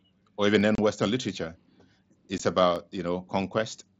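At 0.61 s the stream most likely skipped a fraction of a millisecond of samples, so the waveform jumps straight to a later value and a single sharp click sounds. At 2.76 s the same dropped-samples fault recurs as another click. Between these, unconcealed Bluetooth headset packet loss opens abrupt holes: silence or an idle pattern replaces 30 ms of speech from 0.75 to 0.79 s, which fits four lost frames, and 15 ms from 2.38 to 2.40 s, with hard edges cutting the sound through the mSBC link.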